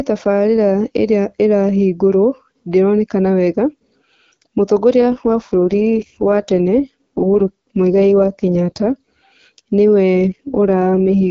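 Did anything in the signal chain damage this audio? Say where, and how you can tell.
Yes. This is an AMR rate drop at the codec stage, driven by the network. From 4.98 s to 8.88 s, and again from 10.14 s to the end, the speech turns rough and raspy while the bandwidth stays the same and nothing drops out. That pattern fits the AMR-WB encoder stepping down from its normal 12.65 kbit/s, where the speech is clear, to 6.6 kbit/s. At that rate too few bits remain to model the vocal tract and excitation pulses accurately.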